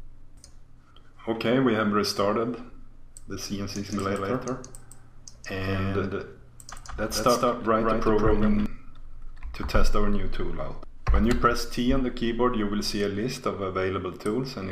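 From 3.90 s to 8.66 s the audio doubles: a second, equally loud copy trails the original by roughly 150 ms, dry and full-band, cutting in and out abruptly. This doubled audio track most likely comes from the same signal being captured twice through a slower second path.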